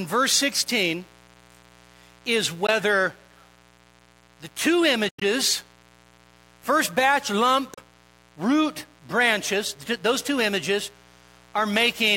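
A steady, raspy buzz sits under the speech from start to finish, at about 30 dB below it. It is mains buzz at 60 Hz: a dimmer, rectifier or unshielded path lets sharp switching spikes into the signal twice per mains cycle. Those spikes carry a dense ladder of 60 Hz harmonics up to several kHz, which gives the hum its gritty edge rather than a smooth tone.

From 2.66 to 2.70 s the speech briefly cuts out, losing about 15 ms of sound. From 5.09 to 5.23 s, right after "the two", it breaks up into scattered holes totalling about 107 ms across roughly 122 ms, the longest gap 91 ms. From 7.74 to 7.81 s, between "first batch lump" and "root branches those two", about 31 ms vanishes. Each hole has either abrupt edges or a fade of a few milliseconds, and the speech picks up later as though it kept running. This is likely a Bluetooth dropout: audio packets reached the headphones too late and were discarded, so the output stayed silent until good packets arrived.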